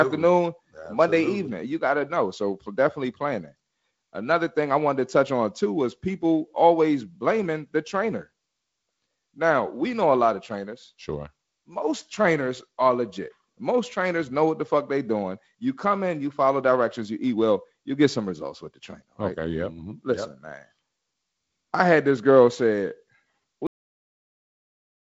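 Cut-off end at 23.67 s: the speech stops mid-sound and falls straight to digital silence, with no natural decay of the final syllable and an abrupt edge where the waveform is severed. The last stretch of audio was never written out, so the remaining time to the end is dead air. The wideband telephone band, with nothing above about 7.7 kHz and a faint coding hiss consistent with G.722 at a reduced rate such as 48 kbit/s, carries through right up to the cut.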